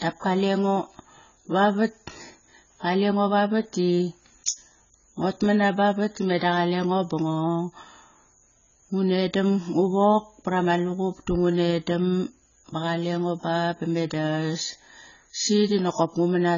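A low-bitrate AAC-LC encode has likely been applied to this speech recording throughout, and the damage is heavy, consistent with a rate somewhere around 16 kbps. To fit so few bits, the encoder has discarded everything above 7 kHz and coarsely quantised the remaining frequency lines. This AAC compression makes the speech dull and smeared, with a warbling, fizzy texture on sustained vowels and sibilants.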